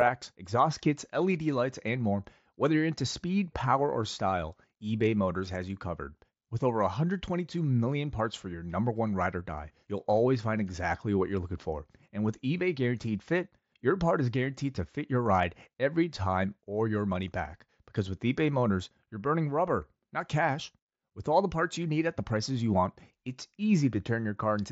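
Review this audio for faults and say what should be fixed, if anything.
Nothing here needs fixing: the speech comes through intact over what sounds like a Bluetooth mSBC headset link, with the band reaching up to about 8 kHz and only the light graininess that codec normally leaves on louder passages.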